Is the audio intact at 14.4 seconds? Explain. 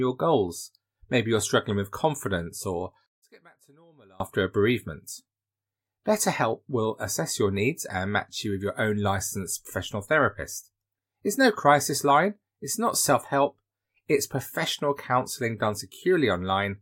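Yes, at 14.4 seconds the speech plays through intact, with no dropout, click, glitch or other technical fault at that moment.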